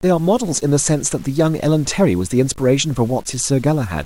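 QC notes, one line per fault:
Throughout: low bit depth without dither. The speech carries a grainy distortion that follows its level. Quiet passages turn gritty and the faintest tails sputter or drop out. The error sits roughly 30 dB below the signal, likely from truncation to about 7 bits.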